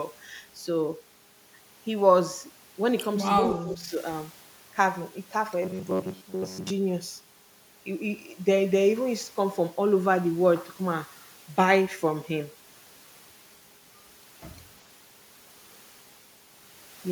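From 3.39 to 3.97 s the speech dips by roughly 10 dB for about half a second in total, thinning and breaking up; this is likely speech suppressed in double talk, the echo canceller ducking the talker while the far end spoke. A waveform shows a shrunken envelope, a spectrogram faded upper bands.

Between 5.62 and 6.71 s the speech becomes a rigid metallic buzz near 93.8 Hz, most of it made of repeats. This robotic sound from repeated short buffers likely comes from a 10.7 ms chunk being looped while real audio was skipped. On a spectrogram it shows as evenly spaced harmonic stripes.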